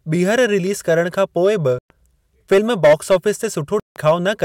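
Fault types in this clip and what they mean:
Bluetooth dropout: at 1.79 s and 3.80 s the speech cuts to silence for about 0.12 s and 0.16 s, likely from late packets that were dropped, then resumes further on.
Hard clipping: from 2.52 to 3.29 s, driven about 7 dB over, peaks are cut flat, with milder clipping from 4.07 to 4.45 s at about 2 dB.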